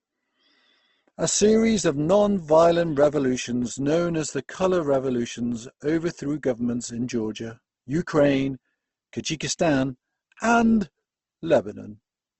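Right from the start and all the way through, the speech carries plainly audible codec damage, most likely Opus compression at a low rate. Nothing comes through above about 8.2 kHz, so the top end sounds clipped off and a bit dull. The encoder seems to be in its music mode, keeping each band's energy but filling starved bands with folded or noisy content, so voiced sounds come out grainy and rough rather than swirly. The damage points to a bitrate around 16 kbps.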